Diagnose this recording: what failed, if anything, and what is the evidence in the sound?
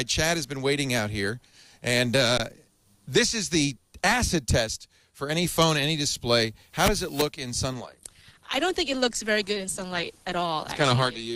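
Underrun with held sample at 2.38 s and again at 4.51 s, a driver or buffer fault in playback. The output buffer ran dry and the converter kept repeating its last value, so the waveform flattens: about 18 ms at the first point, under 3 ms at the second. No audio was lost. The sound resumes exactly where it paused, so each dropout ends softly rather than with a sharp click.

Adaptive stream at a lower bitrate from 7.73 s to the end, a network-driven codec change. When the connection slowed, the player switched to a leaner version of the stream. Nothing above 12.2 kHz survives, and compression artefacts grow more obvious. This points to a drop from around 64 kbit/s to 16 kbit/s Opus. The quality changes abruptly, with no gap at the switch, which is typical of a rendition change rather than a dropout.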